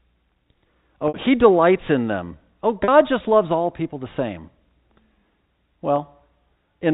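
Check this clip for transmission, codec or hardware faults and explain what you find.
Three short gaps in this speech come from packet loss with pitch repetition, heard through the narrow telephone band of G.711 coding.

At 1.08 to 1.14 s, just before "he delights in them", about 60 ms is lost. At 2.84 to 2.88 s, before "just loves all people", 40 ms is lost. At 5.96 to 5.98 s, 20 ms is lost. These lengths fit three, two and one 20 ms packets. Each time, the receiver fills the hole by repeating the last pitch period, so the voice briefly freezes into a held, slightly buzzy tone. A plain dropout would fall silent or click instead.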